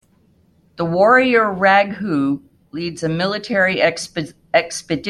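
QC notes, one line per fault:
No technical faults are audible in the signal; level, continuity and frequency content stay steady across the whole recording.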